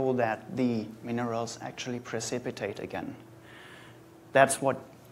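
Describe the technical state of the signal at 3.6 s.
At 3.6 s the signal is intact, with no audible technical fault at that moment.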